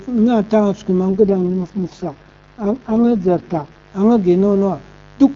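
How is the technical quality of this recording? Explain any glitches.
The recording has two clear faults: a constant mains buzz, and one stretch where the phone codec audibly degrades.

Mains buzz runs throughout. Switching spikes, twice in every cycle of the 50 Hz mains, leak into the signal and add harmonics, producing a steady raspy buzz about 30 dB below the speech.

An AMR rate drop occurs from 1.10 to 3.92 s. The network pushes the AMR-WB codec from its top rate down to what sounds like 6.6 kbit/s, leaving the bandwidth intact but making the speech rough and synthetic, with no gap.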